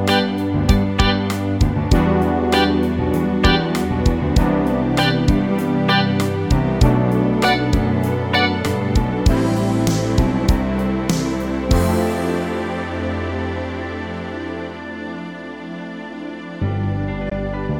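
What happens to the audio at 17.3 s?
Right around 17.29 to 17.32 s the sound briefly drops out, a short hole of about 14.5 ms, and then picks up again a little further along, as though it had kept playing through the gap. That's a Bluetooth dropout, likely from a packet that didn't reach the headphones in time, so the output just went silent until the next good one arrived. The size of the gap fits a single lost packet.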